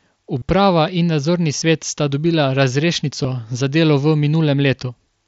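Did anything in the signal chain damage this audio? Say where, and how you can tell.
Yes. The damage happened on the Bluetooth radio link between headset and phone, as concealed Bluetooth headset packet loss. It occurs at 0.38–0.42 s, just before "in nadzorni"; at 1.60 s, between "in nadzorni" and "sta dobila"; and at 3.24 s, just before "za delo v". The 0.38 s event lasts about 38 ms, which fits several consecutive lost frames. Rather than dropping to silence, as a plain dropout would, each gap is filled by repeating the best-matching recent stretch of waveform. In the runs at 0.38 s and 1.60 s, that gives a brief buzzy held tone at full level and a small warble where real speech resumes, while the single lost frame at 3.24 s is nearly hidden. The mSBC codec's faint grain on loud syllables is separate from these events.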